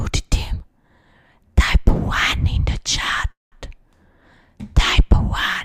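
At 3.31 s a call audio freeze sets in, lasting to 3.55 s. The last sound smears into a fading buzz or hiss, then 170 ms of silence, and resumes where it stopped. Delayed packets likely emptied the jitter buffer. Nothing is lost, but what follows plays 204 ms late.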